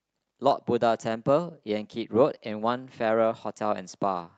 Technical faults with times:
none

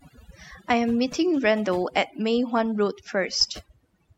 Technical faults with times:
0.00-4.17 overdone noise removal

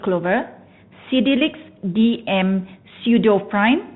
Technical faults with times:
0.00-3.95 Bluetooth CVSD headset codec

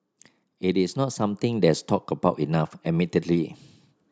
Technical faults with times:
0.61-1.89 automatic gain rising

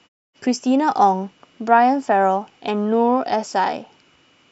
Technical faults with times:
none

